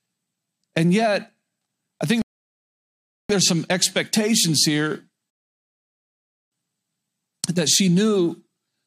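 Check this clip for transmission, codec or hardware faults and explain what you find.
Two rebuffering stalls interrupt this speech clip, and they're transmission faults on the playback side. The first runs from 2.22 to 3.30 s, right after "I think", adding about 1.08 s of silence before "there's some expectations here" carries on. The second hits at 5.30 s, just after "there's some expectations here", and lasts until 6.52 s, about 1.22 s. Each time the player drained its downloaded buffer and simply waited for more data, so the sound drops to dead silence and picks up exactly where it left off. Nothing's missing, it's just stretched out in time.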